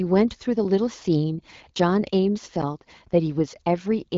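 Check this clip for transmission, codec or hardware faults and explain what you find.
One transmission fault is present in this speech clip, which is carried by an AMR wideband (HD Voice) codec whose light coding texture is consistent with a rate around 12.65 kbit/s.

From 1.36 to 1.52 s there are AMR bit errors: a span that fits roughly eight 20 ms frames arrived with a few percent of their weakly protected bits flipped. Misplaced excitation pulses and skewed pitch, gain and spectral values make the speech briefly hoarse, scratchy and gargly, while its pitch and level stay roughly intact.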